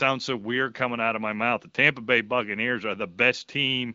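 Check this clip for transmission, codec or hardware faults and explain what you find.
One fault is present: channel delay (comb filtering), from 2.52 s to the end of the speech. One channel arrives roughly two samples late, a shift of around a twentieth of a millisecond, and the two channels are summed to mono. With so small an offset, the first cancellation notch sits up near 10 kHz. That is above the roughly 7.5 kHz ceiling of the AMR-WB wideband coding, so no distinct notch is audible. The partial cancellation still grows toward the top of the band, and the speech turns dull and veiled from that point onward.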